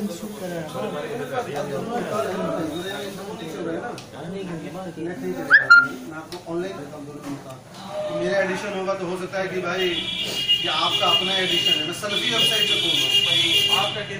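Damaged data in a compressed stream shows up at 6.77 s and again from 9.25 to 9.27 s as brief disruptions, where the decoder misreads corrupted frames, loses sync and resumes at the next frame header.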